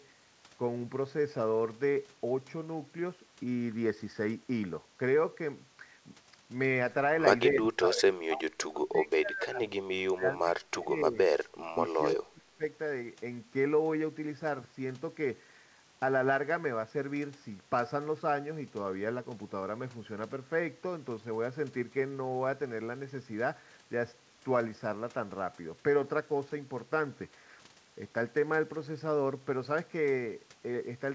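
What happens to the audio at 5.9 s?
Nothing goes wrong at 5.9 s: the speech carries on intact through that moment, with only the steady wideband call-codec character and nothing above 8 kHz that runs through the whole recording.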